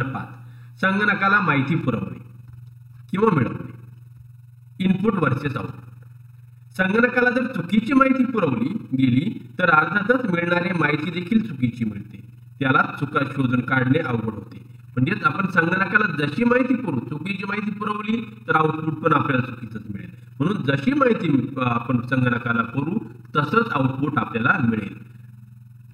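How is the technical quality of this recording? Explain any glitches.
The recording has a clear fault from 1.81 s to the end. Overlap-add ripple: the audio was split into windowed frames and rebuilt with overlaps whose gains don't sum to a constant, so the level dips and swells once per frame, roughly 20 times a second, by about 11 dB. The sound takes on a fast, rough flutter, a robotic tremolo that rides over everything after 1.81 s.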